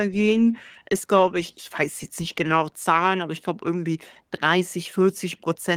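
No technical faults can be heard anywhere in this recording.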